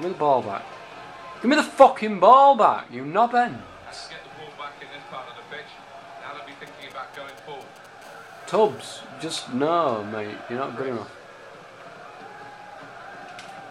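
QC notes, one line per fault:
6.67–7.87 s: GSM signalling bursts. Galloping groups of ticks and short buzzes, roughly 25 dB below the signal. A nearby 2G phone's radio bursts are being rectified by the audio circuit.
8.02–8.90 s: GSM phone buzz. Steady, raspy 217 Hz buzz rich in harmonics, about 32 dB below the signal. A phone in a call pulses continuously, and the circuit demodulates each burst.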